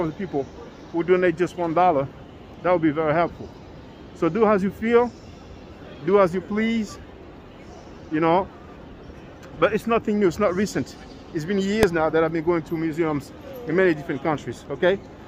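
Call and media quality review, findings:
Single very loud bang at 11.83 s, sharp and instantaneous. Invalid numbers at full scale: a processing stage produced infinite or invalid values that clipped to maximum level for a block of about 0.73 ms, too short to hear separate edges.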